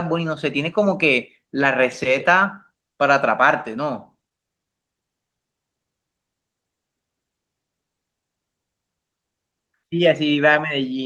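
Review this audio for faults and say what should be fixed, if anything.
No faults; nothing needs fixing.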